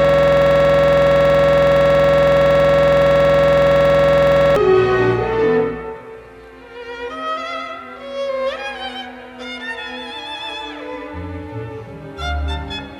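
The audio opens already caught in a system hang loop, which lasts until 4.56 s. The machine stalled while the sound hardware kept replaying one 46.44 ms slice, which fits a 2048-sample buffer. It repeats nearly a hundred times, producing a rough buzz at 21.5 Hz.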